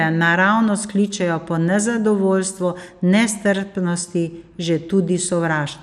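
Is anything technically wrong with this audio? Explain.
Yes. Throughout the speech there is what is likely MP2 compression at a low bitrate, near 80 kbps. Too few bits force upper sub-bands to switch off and flicker, and the remaining bands are coarsely quantised, so the sound is dull with a plainly audible gurgling, granular texture.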